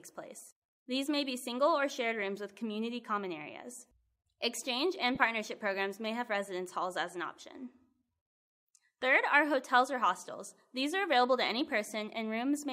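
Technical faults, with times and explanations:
5.15 to 5.17 s, lost LE Audio frames: about 20 ms of sound went missing, which fits two 10 ms frames. The LC3 decoder filled the gap by repeating the last spectrum with random signs, so the passage turns into a brief noisy smear.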